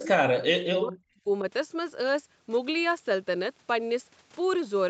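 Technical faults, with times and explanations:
0.00–0.09 s and 0.34–1.45 s, speech suppressed in double talk: the speech level collapses in two places, first a short dip of about 25 dB right at the start, then a longer stretch of roughly a second where it falls by up to about 40 dB. The likely cause is an echo canceller facing simultaneous far-end audio, mistaking the near-end talker for loudspeaker echo and attenuating both.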